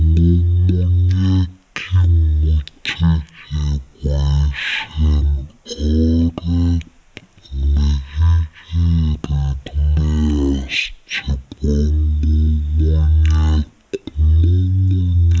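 From start to finish the speech runs at about 0.36 times normal speed and sits roughly 17.6 semitones low, slow and deeply dragged. That is a wrong sample rate, consistent with 44.1 kHz material played back at 16 kHz without conversion.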